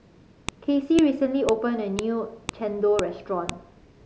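Sharp, loud clicks cut through this speech clip at a steady half-second rhythm, at 0.49, 0.99, 1.49, 1.99, 2.49, 2.99 and 3.49 s. This is a file header played as audio: WAV pieces of 0.5 s were joined with their header bytes left in. Those bytes play as samples and give a snap at each join whatever the speech is doing.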